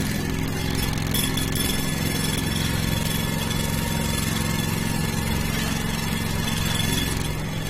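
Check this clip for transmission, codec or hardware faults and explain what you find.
One codec fault runs through the whole clip.

Transcoding between lossy codecs, from start to finish: the audio likely passed through one lossy encoder and was then re-encoded by another. The second stage wastes bits encoding the first stage's artefacts and adds its own. Here nothing sounds above 16.6 kHz, the lowest cut-off in the chain, which stays. The sound carries two layers of artefacts at once. Together they suggest an AAC-LC encode near 48 kbit/s followed by Vorbis near 63 kbit/s.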